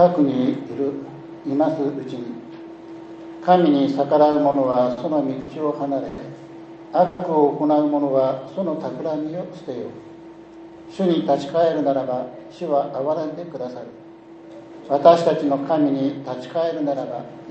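From 4.31 to 4.99 s the audio shows repeated stalls, a stutter. Packets reached the receiver late or more slowly than they were played out, so the jitter buffer ran dry four times in quick succession. Each time the receiver extended the last sound to cover the wait, about 110 ms in total, with the longest hold near 50 ms. That is roughly 16% of the stretch spent on concealment. Nothing is lost, but the passage drags and catches.

At 5.41 to 5.50 s there is a short stall from a late packet. One packet was missing when its playout time came, the buffer emptied, and the receiver held the preceding sound for about 70 ms until the packet arrived. Playback then resumed from the same point, so the overall delay grew by 70 ms. It is heard as one sound lingering too long, with a faint buzz or dip.

Two call audio freezes follow, from 6.08 to 6.20 s and from 7.06 to 7.21 s. In each, the last sound is continued as a buzz or hiss that fades without reaching silence, lasting about 100 ms and then about 130 ms. 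Afterwards the audio picks up exactly where it stopped. The likely cause is packets held up in transit, draining the jitter buffer. Since no content is skipped, each event inserts a gap and pushes playback later by its own length.

Between 8.40 and 9.37 s the jitter buffer slow-down is audible. With the buffer running low, the receiver rebuilt its reserve by repeating single pitch periods and fragments of pauses many times over. This added about 89 ms, so playback runs at roughly 92% of normal speed while pitch stays unchanged. Sounds come out slightly drawn out.

From 11.30 to 14.50 s the opposite correction appears, a jitter buffer speed-up. The buffer held more audio than its target, so the receiver trimmed short pieces of one or a few pitch periods, again and again, to bring the delay down. Around 0.3 s is removed over the span, giving about 109% speed at the original pitch. The passage sounds hurried and compressed.

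Throughout, the audio passes through an Opus call path at 64 kbps, with content limited to about 8 kHz.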